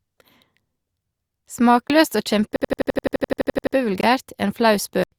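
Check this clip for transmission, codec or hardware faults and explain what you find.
The speech has two kinds of fault: three blocks of digital silence and one system hang loop.

Blocks of digital silence occur at 1.88 to 1.90 s and 4.01 to 4.03 s, each about 21 ms, and at 5.04 to 5.12 s, about 85 ms. The output buffer likely went unfilled and was sent as zeros. The short gaps fit a 1024-sample buffer and the longer one a 4096-sample buffer. Each cuts out and back abruptly with no fade. On a waveform they are near-flat lines. A spectrogram shows dark vertical slots.

The system hang loop runs from 2.56 to 3.76 s. The machine stalled while the hardware kept replaying one buffer, so a single 85 ms slice, which fits a 4096-sample buffer, repeats 14 times at about 11.7 Hz. It sounds like a machine-gun stutter, with little or no speech lost afterward. The waveform shows an identical pattern tiled end to end. 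On the spectrogram, evenly spaced vertical seams appear at each repeat, with the same spectral shape copied between them.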